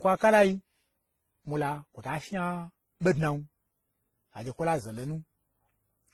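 Throughout the speech, two kinds of watery, smeared coding artefacts overlap, likely from transcoding between lossy codecs: a low-bitrate WMA encode re-encoded to Opus.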